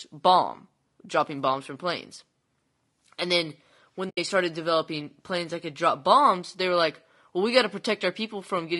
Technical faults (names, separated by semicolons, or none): low-delay AAC compression; AAC frame loss with muting